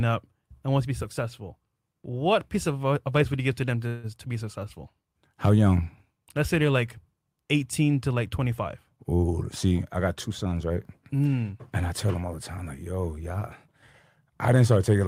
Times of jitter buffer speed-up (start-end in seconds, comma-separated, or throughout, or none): 9.26-9.72, 10.30-11.34